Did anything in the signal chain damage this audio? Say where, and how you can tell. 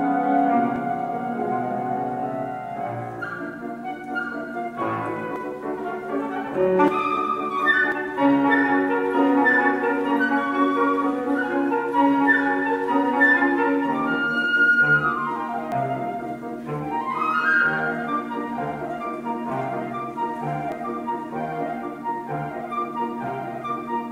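Yes. Forward jumps at 0.76, 5.36, 6.88, 7.92, 15.72 and 20.72 s, each skipping roughly 40 to 100 ms, point to a likely dropped buffer (overrun) at the driver stage, where samples were overwritten before being read.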